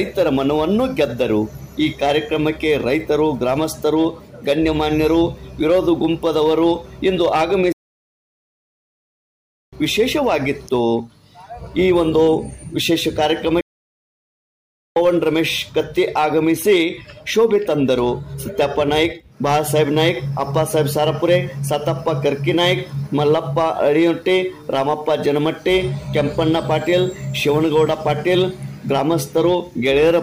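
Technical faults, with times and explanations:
7.72–9.73 s and 13.61–14.96 s, playback stall: the sound cuts off abruptly in mid-flow and falls silent for about 2.0 s, then again for about 1.35 s, before carrying on. The likely cause is the player running short of buffered data or its output thread being blocked, so nothing reaches the output until it recovers. On a waveform each gap is a flat line with hard edges; a spectrogram shows a clean, fully empty vertical band at each time.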